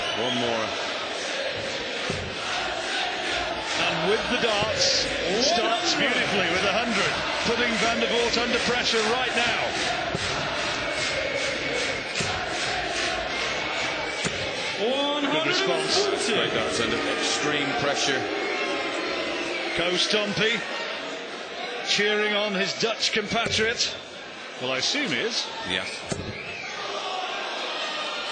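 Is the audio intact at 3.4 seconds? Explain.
Yes, at 3.4 seconds the audio is intact, with no dropout, click, distortion or other fault at that moment.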